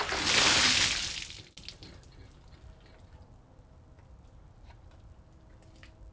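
Resampler restarted on every block, throughout the whole recording of everyday sound: a steady 100 Hz buzz rides on the material wherever there is signal. The conversion, which points to a 48 kHz to 16 kHz step, was run on 10 ms blocks independently, so each block edge was filtered without its true neighbouring samples. The small error left at every seam repeats at the block rate, fusing into that buzz rather than separate ticks.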